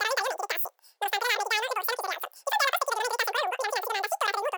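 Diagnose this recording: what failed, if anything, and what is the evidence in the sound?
Wrong sample rate at playback: apparently 16 kHz audio played at 44.1 kHz runs 2.76 times fast and 17.6 semitones high; spectrogram formants ride higher and syllables compress.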